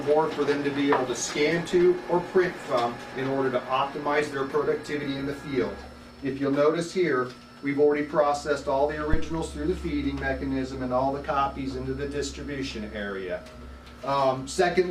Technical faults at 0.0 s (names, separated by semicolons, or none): none